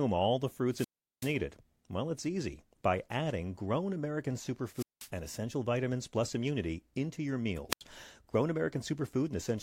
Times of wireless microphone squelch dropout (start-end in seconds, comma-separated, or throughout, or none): 0.69-1.38, 4.74-5.09, 7.70-7.82